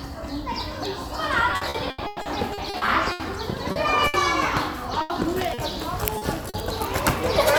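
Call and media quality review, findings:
Repeated packet loss (robotic sound), 1.51–3.23 s: choppy sound with pieces missing. Network/jitter buffer; 11 gaps, longest 110 ms, each patched by continuing the last sound, a third of the span concealed, about 0.4 s lost.

Short concealed packet loss at 3.72–3.79 s, 5.54–5.61 s and 6.18–6.25 s: brief smear or wobble, 40 ms each. Network loss; decoder concealment extends the preceding sound over the hole, then crossfades back, dropping 40 ms of real audio each time.

Burst of packet loss, 4.08–4.17 s and 5.02–5.13 s: held buzz or fading hiss, then sound resumes further on. Consecutive packets lost; concealment continues and attenuates the last sound. About 40 ms and 80 ms of audio missing respectively.

Short stall from a late packet, 6.50–6.57 s: one sound held about 40 ms too long, slight dip. Jitter buffer underrun; the packet arrived 40 ms late, the last sound was stretched until it came, and playback continued from the same point with nothing skipped.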